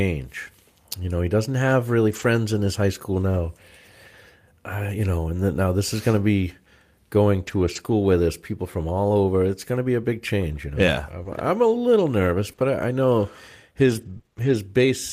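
At 2.11 s, after "he doesn't have really" and before "in his high school", there is a lost packet rebuilt from error correction. About 80 ms of speech sounds rougher and noisier, which fits four lost packets. Each next packet carried a low-bitrate copy, and the decoder played that instead, so there is no gap. The same happens from 7.43 to 7.81 s, after "going to be going" and before "where there's people from". This time 200 ms is degraded, which fits ten packets.

From 11.23 to 14.55 s, after "know yeah", come scattered short gaps. Packets went missing one at a time. About seven small holes appear, none longer than about 20 ms. The receiver filled each by extending the sound just before it. Roughly 5 percent of this stretch is patched. You hear brief ticks, smears and hiccups, while the speech stays clear between them.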